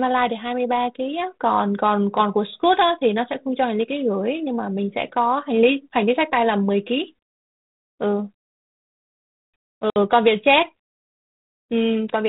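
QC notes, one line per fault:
9.90 to 9.97 s, packet loss on an ADPCM call: about 60 ms of speech drops to hard-edged silence, roughly three packets; the decoder's adaptive predictor and step size lose track, so speech resumes briefly slightly distorted.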